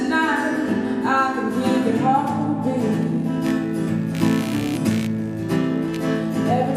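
From 3.02 s to the end of the clip, the audio carries computer activity noise: a buzzing, chirping layer pulsing at around 70 times per second, roughly 20 dB below the wanted signal. Processor, graphics or mouse load currents disturb the ground shared with the audio circuit. Unlike mains hum, which holds a steady 50 or 60 Hz tone, this noise's gritty pulses follow the machine's workload rather than the recorded sound.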